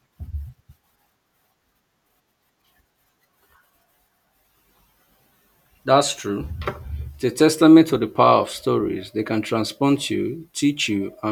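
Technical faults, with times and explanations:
No technical faults are audible in the speech signal; level, continuity and timing hold steady across the whole clip.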